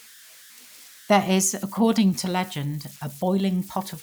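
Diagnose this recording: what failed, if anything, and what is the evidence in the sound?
The converter stage failed. Converter idle tones run through the whole speech clip. A whistle sits around 1.5 kHz, most exposed in the pauses between phrases. Under quieter passages it turns to a grainy hiss. The error is about 25 dB below the signal. The cause is an undithered delta-sigma converter. With little input, its modulator settles into repeating bit patterns. Those patterns produce steady tones, their pitch set by the input's DC offset.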